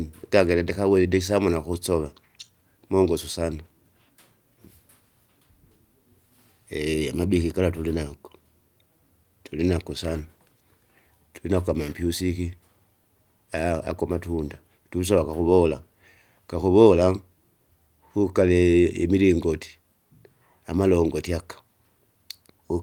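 No technical faults can be heard anywhere in the speech. There is nothing to place on the timeline and nothing to measure.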